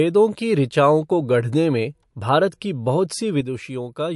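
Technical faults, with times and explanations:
Throughout, MP3 compression: the audio is cut off hard with nothing above about 11.3 kHz, and the damage is plainly audible, with that watery, swirly texture on the speech and smeared consonant attacks. This is likely from a lossy MP3 encode that ran short of bits. The sound fits something around 54 kbps, where the encoder lops off the top band and lets weak frequency lines flicker on and off between frames.
3.41 s to 4.15 s, one channel drops out: right after "में भारत की बहुत" the speech suddenly falls by about 6 dB and stays down until the clip ends. The likely cause is one stereo channel going silent. Once the channels are summed to mono, the material shared by both loses half its contribution, which produces that abrupt 6 dB step. Anything carried only in the lost channel vanishes entirely.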